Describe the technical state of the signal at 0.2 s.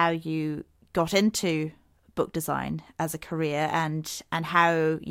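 At 0.2 s the signal is intact, with no fault audible at that moment.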